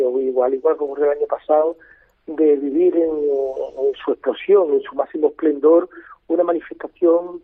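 No technical faults can be heard anywhere in this recording.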